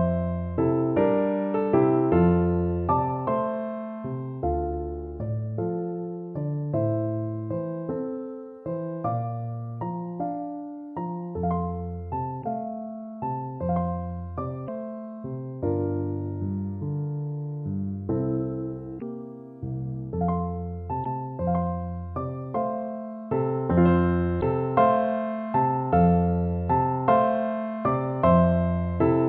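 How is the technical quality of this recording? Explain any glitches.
Technical quality is poor: the whole recording carries plainly audible compression damage, and five brief glitches break it up between 12.4 and 24.4 s.

The encoding is likely MP3 compression at a low bitrate, which fits something around 64 kbps. Starved of bits, the encoder discards the top of the spectrum above a fixed cut-off and drops quieter frequency components, which then flicker in and out between frames. Throughout, the audio sounds dull and watery, with a swirling, metallic edge on bright or hissy content and softened attacks.

Damaged data in a compressed stream causes the glitches at 12.40, 14.64, 18.98, 21.02 and 24.39 s, each lasting about 40 to 50 ms. At those points the stream contains corrupted bytes, so the decoder misreads or rejects the affected frames, loses sync and hunts for the next valid frame header. 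Each is heard as a short chirp, squawk, click or brief hole.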